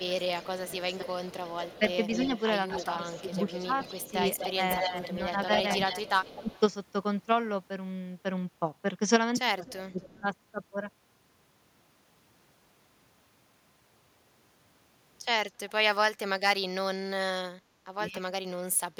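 Right from 0.0 to 6.6 s there's an echo leak: a copy of the speech trailing by about 250 ms, only about 10 dB under the talker. It's likely a loudspeaker on the far end whose echo canceller isn't removing all of what its mic picks up. Across that same stretch, 0.07 to 6.5 s, you get speech suppressed in double talk. The talker dips by as much as about 15 dB in bits adding up to roughly a second and a half, likely because the canceller can't tell the talker from the echo and turns both down. The leak comes back at 9.66 to 10.21 s with a 262 ms delay, now about 20 dB down, and the talker is briefly pulled down again at 9.82 s. At 15.49 to 15.71 s there's a very faint echo, around 35 dB down, at 273 ms. At 18.12 to 18.19 s a 278 ms echo about 20 dB down comes right before one last suppression from 18.2 to 18.34 s, where the talker drops by about 20 dB.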